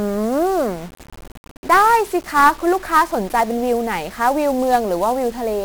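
Throughout the speech, 1-bit DFPWM compression leaves heavy broadband quantisation noise: one bit per sample steers the waveform, so everything sounds fuzzy and crackly, with treble buried in hiss.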